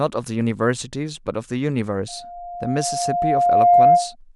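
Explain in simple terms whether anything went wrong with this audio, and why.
Something did go wrong: a loudspeaker feedback squeal starts at 2.08 s and runs until 4.15 s. A microphone picked up the loudspeaker it was feeding, and the sound looped round, getting louder each pass. A single tone at 703 Hz swells over about a second and a half until it is much louder than the speech. Unlike a steady hum or whistle, it grows on its own rather than sitting at a fixed level.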